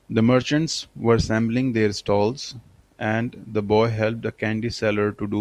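No technical faults can be heard in this speech recording.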